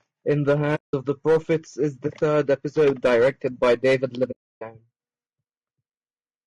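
Throughout the speech the voice sounds rough and grainy, with a noisy fill between harmonics. The likely cause is low-delay AAC compression (AAC-ELD): its short frames resolve pitch harmonics poorly, and the damage fits a bitrate near 32 kbps.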